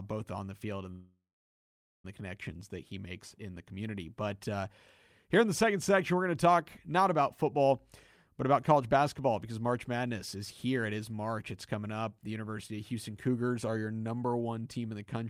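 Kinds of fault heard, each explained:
Call audio freeze: At 0.91 s the speech stops dead and stays stopped until 2.05 s. For the first part of that stretch a fading buzz carries on from the last sound, then about 0.81 s of silence follows. When the audio resumes, it picks up exactly where it left off, with nothing skipped. The cause is likely held-up packets draining the jitter buffer, so everything afterwards now runs about 1.13 s later.
Jitter buffer speed-up: Between 8.53 and 8.95 s the speech briefly hurries to about 108% of its normal speed while the pitch stays put, so it sounds a bit rushed rather than chipmunky. The receiver had more audio queued than it wanted and trimmed roughly 40 ms out of that stretch by cutting tiny pitch-period-sized pieces one after another to bring the delay back down.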